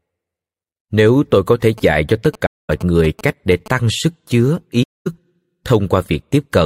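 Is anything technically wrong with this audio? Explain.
Yes. There are two kinds of fault.

From 1.78 to 3.68 s there are GSM signalling bursts. A nearby 2G phone is exchanging short control bursts with the network, and the audio circuit rectifies them. They come through as a galloping dit-dit-dit of short buzzes repeating at 217 Hz, roughly 20 dB below the speech.

At 2.46 to 2.70 s and again at 4.82 to 5.07 s there is AAC frame loss with muting. Each gap lasts about 235 ms, which fits around eleven lost frames that the decoder replaced with silence. The overlapping windows fade the speech out and back in, leaving a soft-edged hole.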